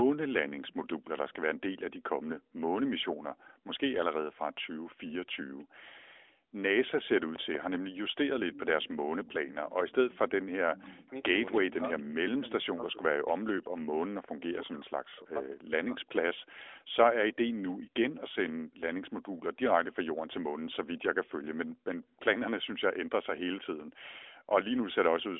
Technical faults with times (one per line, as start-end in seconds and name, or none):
0.65-1.35 echo leak
8.52-11.75 echo leak
10.80-16.13 speech suppressed in double talk
16.39-18.32 echo leak
22.10-22.15 echo leak